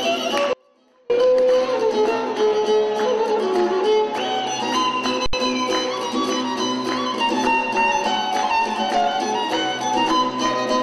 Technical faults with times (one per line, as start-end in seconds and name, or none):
0.53-1.10 audio dropout to a faint residue